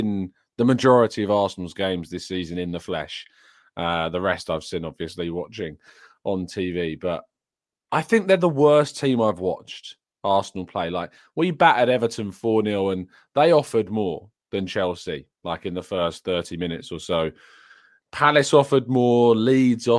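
Speech recording, no technical faults detected.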